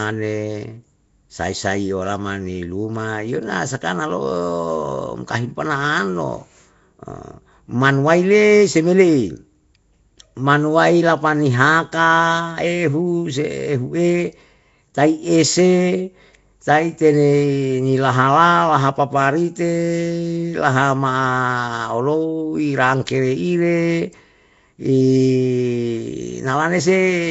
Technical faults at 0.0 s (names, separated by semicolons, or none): Nellymoser compression